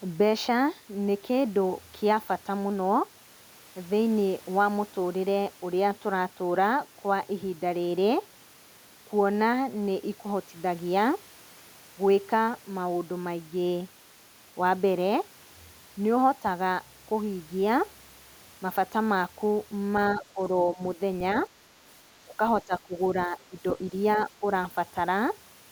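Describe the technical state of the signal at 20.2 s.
Between 20.14 and 20.39 s the speech dips by about 10 dB, likely speech suppressed in double talk: an echo canceller ducked the talker along with the echo.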